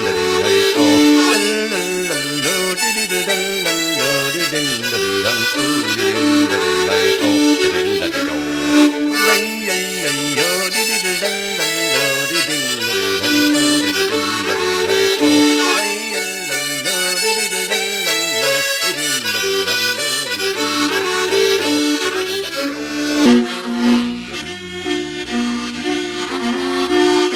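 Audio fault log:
23.26 to 27.36 s, section at the wrong speed: the closing stretch of the audio runs at about 0.81 times its recorded speed, most likely because this part was played back or rendered against the wrong clock rate. Since speed and pitch are tied together here, everything in that span slows and drops by roughly four semitones at once, so the sound turns deeper and more sluggish right up to the end of the clip.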